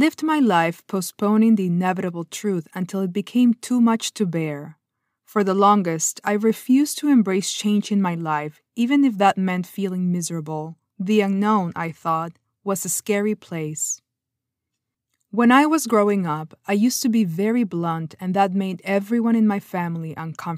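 Speech, with nothing technically wrong to point to at any time in the recording.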